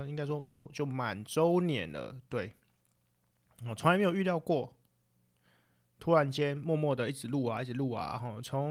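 A call audio freeze occurs from 0.39 to 0.67 s. For about 260 ms the sound stalls and the last fragment is stretched into a buzzing or hissing continuation rather than dropping to silence. It is likely caused by packets arriving late and the jitter buffer running dry, so the receiver covered the wait with synthesised fill. When delivery resumes, speech picks up exactly where it stopped. Nothing is lost, but the 260 ms gap adds that much delay to everything after it.

A jitter buffer speed-up runs from 6.41 s to the end at 8.70 s. The buffer was holding more audio than its target, so the receiver trimmed it back by repeatedly cutting out short slices, each one or a few pitch periods long. In total roughly a fifth of a second is removed. The speech plays at about 108% speed with its pitch unchanged, which comes across as noticeably hurried delivery.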